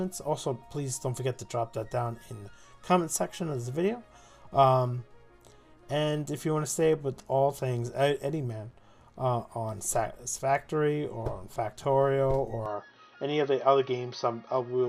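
At 12.66 s the input likely switched to a poorer device, cutting everything above 6.1 kHz, so the sound turns duller and boxier to the end, with no gap, faint new noise and unchanged level.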